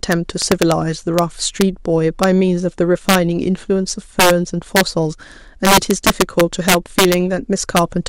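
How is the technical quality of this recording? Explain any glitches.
The recording has a clear fault: integer overflow throughout the speech. Loud peaks, driven about 5 dB past full scale, wrap to the opposite sign instead of limiting, producing sharp, violent cracks on under one percent of samples.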